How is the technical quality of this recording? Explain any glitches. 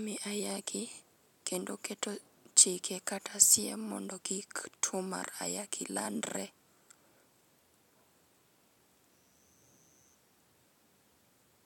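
Nothing to flag here: the speech runs along without a single technical glitch to point to.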